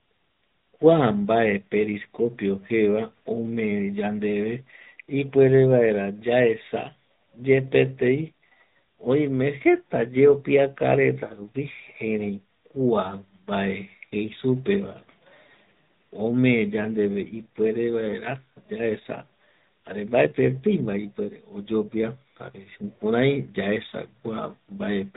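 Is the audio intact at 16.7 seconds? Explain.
No. At 16.7 s the speech is running through the AMR narrowband mobile codec, as it is for the whole clip, and the damage is plainly audible. The codec samples at 8 kHz, so nothing above 4 kHz survives, and it rebuilds the voice from a vocal-tract model fed by a handful of pulses every few milliseconds. The result sounds boxed-in and somewhat buzzy and synthetic, which fits an upper-range mode around 10 kbps.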